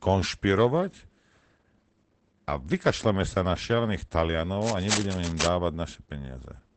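The whole clip carries Opus voice compression. The speech sounds muffled and a little hoarse, with nothing above about 8.7 kHz. That points to the SILK linear-prediction coder at a low rate, around 12 kbps, coarsely coding the excitation and leaving plainly audible damage.

Then, right after "na šialených", from 4.61 to 5.49 s, there's cable scratch noise: dense, uneven rustling sitting nearly as loud as the speech. It's likely a worn cable or connector being moved, its contact resistance jumping around.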